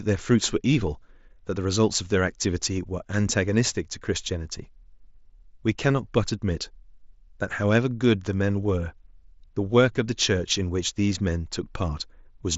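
Nothing goes wrong here: the speech comes over a Bluetooth mSBC headset link, so the sound stops at about 7.7 kHz and carries that codec's light graininess, and no fault turns up anywhere in it.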